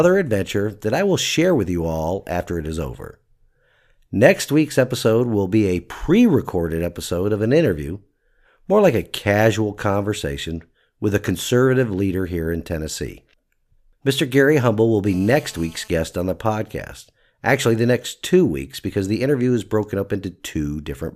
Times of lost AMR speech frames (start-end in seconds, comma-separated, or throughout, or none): none